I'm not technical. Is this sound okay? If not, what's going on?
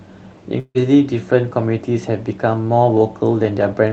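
No. At about 0.59 s the speech breaks off until about 0.78 s, a long network dropout. That gap was most likely caused by audio packets failing to arrive over the call connection. The receiver papered over the hole by stretching the last bit of sound into a fading buzz for roughly 0.15 s, then about 50 ms of near-silence. When the speech returns, around 0.16 s of it is simply gone.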